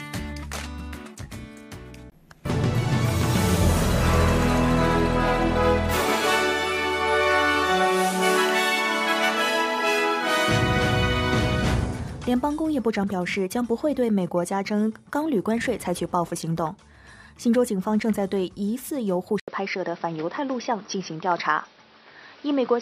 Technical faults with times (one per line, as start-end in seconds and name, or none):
19.40-22.81 input switched to a poorer device